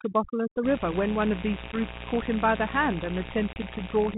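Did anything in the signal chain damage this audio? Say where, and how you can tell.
Yes. Call processing damaged this speech. Overdone noise removal runs through the whole clip. The background sinks to near silence with twinkling specks. A suppressor set too hard pulls individual frequency bands down whenever they sit near its noise estimate. The quiet parts of the speech fall below that line and are cut along with the noise. What is left is patchy spectral debris.

Mains buzz enters in the analogue wiring at 0.61 s and lasts to the end. It is a steady, raspy buzz at about 10 dB below the speech. Its fundamental is 60 Hz. Sharp switching spikes, twice per mains cycle, come from a dimmer, a rectifier or a missing shield. Those spikes spread harmonics of 60 Hz up into the kilohertz range. That is why it rasps rather than hums.

Packet loss on an ADPCM call shows up twice on the network side. 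At 1.72 s, a 10 ms hole cuts in, and the sound settles by 1.81 s. At 3.53 s, a 30 ms hole follows, and it settles by 3.57 s. These point to about one lost packet and then about three. Each gap has hard edges. The speech comes back slightly distorted. The decoder's predictor and step size have drifted from the sender's, and they take tens of milliseconds to realign. The band limit and mild coding hiss fit the codec's normal 32 kbit/s G.726 operation.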